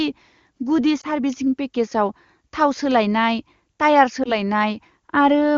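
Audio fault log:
1.01–1.06 s, lost AMR speech frame. One 20 ms frame failed its checksum and was dropped. The decoder filled the gap by repeating the last good pitch and vocal tract settings at lowered gain. The sound dips briefly or warbles.
4.23–4.35 s, lost AMR speech frame. Again a single frame went missing. Concealment plus a weak or rough recovery stretch the disturbance to about 0.12 s. The surrounding wideband speech is clear, which fits a high AMR-WB rate.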